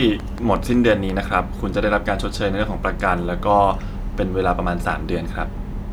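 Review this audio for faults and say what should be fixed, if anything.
A train of clicks runs from 0.02 to 1.1 s: about seven regular pulses at 5.6 per second, peaking roughly 5 dB above the speech. They show as evenly spaced vertical broadband lines on a spectrogram and sharp spikes on the waveform. The likely cause is electrical interference or a faulty connection or power supply. Moving nearby equipment away from the interface and its cables, and checking connections and drivers, should prevent it.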